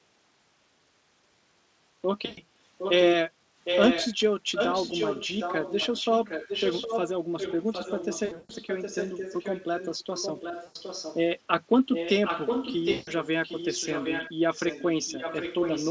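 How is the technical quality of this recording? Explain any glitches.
The recording has two kinds of fault: dropouts where the audio smears into a fading buzzy tone or coloured noise, and a recurring delayed echo of the speech.

VoIP packet loss concealed by the speech codec occurs at 2.25 s (120 ms), 8.25 s (200 ms scattered over 240 ms), 10.63 s (120 ms) and 12.91 s (160 ms). The sound stretches into a buzzy tone or coloured noise that fades, because the decoder extrapolates from its last frame while packets are missing.

An echo leak runs from 2.78 to 3.14 s, 3.64 to 4.16 s, 4.53 to 7.11 s, 7.38 to 11.22 s, 11.91 to 13.27 s, 13.43 to 14.32 s and 14.54 s to the end. Each time, a copy of the speech trails about 0.76 s behind. It ranges from about 10 dB below the original to as loud as the original. The likely cause is an echo canceller on a loudspeaker end letting its pickup through.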